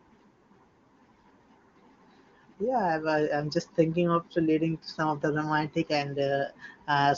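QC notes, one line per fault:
No faults heard.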